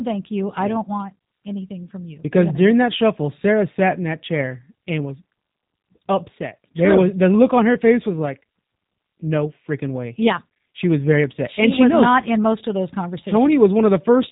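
Speech throughout, carrying plainly audible G.729 codec damage from start to finish, consistent with an 8 kbit/s G.729A stream. The codec rebuilds each 10 ms frame from a vocal tract filter, a pitch predictor and a few pulses, giving a synthetic texture. On a spectrogram, energy stops sharply near 3.8 kHz, leaving the band above empty.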